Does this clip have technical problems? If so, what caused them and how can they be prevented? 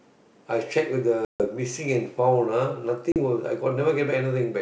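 Yes. Packet loss on the ADPCM call leaves hard-edged silent gaps at 1.25–1.45 s and 3.12–3.17 s. Afterward, the decoder's predictor and step size mismatch the sender's, so the speech returns slightly distorted before it settles. Forward error correction, a more reliable network path and packet loss concealment that resynchronises the decoder state would prevent it.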